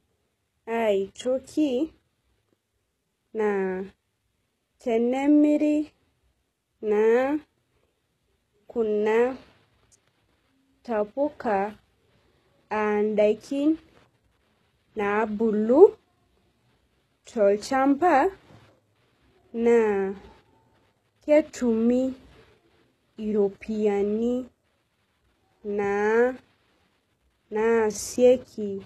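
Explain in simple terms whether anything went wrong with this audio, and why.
Something did go wrong, and it lasts the whole recording: the speech carries plainly audible HE-AAC compression damage. The likely cause is heavy squeezing of the file to save space. This method stores only the lower part of the sound and invents the crisp top end by copying lower sounds upward. That explains why s sounds come out gritty or lispy and nothing is heard above about 12.3 kHz. A plainly muffled recording would sound dull, but this one still sounds bright, just artificial.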